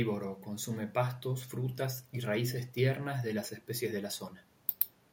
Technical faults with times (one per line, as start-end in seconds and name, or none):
none